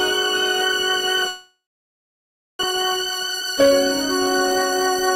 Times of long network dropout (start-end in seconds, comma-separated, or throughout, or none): 1.27-2.65